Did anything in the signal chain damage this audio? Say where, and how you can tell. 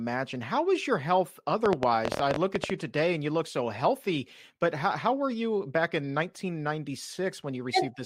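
Yes. Between 1.66 and 2.71 s, right after "how was your health" and before "you today and you", there's a train of clicks, around fifteen of them at 13.5 per second, spaced irregularly and peaking about 20 dB above the speech. They all have much the same shape and tick over the audio itself. The cause is likely a faulty connection or power supply, or interference leaking into the analogue wiring, which would inject a pulse each time it trips.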